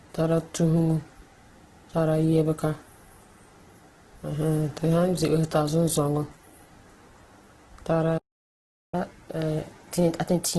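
Heavy lossy coding, likely Opus in its music mode at a low rate that fits about 12 kbps, runs through the whole speech clip. Band energy is kept but the detail is filled in coarsely, so the voice sounds grainy and rough, and nothing is left above 12.4 kHz.

At 8.17 s the output drops out, likely because the player starved of data or its thread blocked, and this playback stall leaves about 0.75 s of silence in mid-flow before the sound resumes at 8.95 s.

From 8.95 s to the end the player works off its backlog by resampling, a catch-up at higher speed: the speech runs at 1.1 times normal speed, and its pitch is raised by roughly one and a half semitones, so it sounds hurried and higher.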